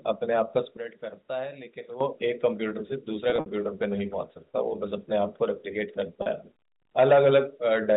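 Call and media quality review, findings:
Sudden gain jump, 0.77–2.01 s. Likely an unramped gain change in the digital path, a setting or bit shift applied from one sample to the next. Level drops by about 12 dB abruptly, speech and noise floor together, and snaps back at 2.01 s.

Packet loss with pitch repetition, 3.30–3.46 s. Packets lost, concealment repeating the last pitch period. About 100 ms lost in bursts over 160 ms, longest run 60 ms. Audible as a held, buzzy tone fading toward silence before speech cross-fades back. Loss pattern fits 20 ms packets.

Same fault at 6.22–6.26 s, 40 ms lost. Shorter gap, heard as a brief buzzy hold rather than a dropout. G.711 A-law path at 64 kbps, telephone band up to 4 kHz, with faint coding noise at most.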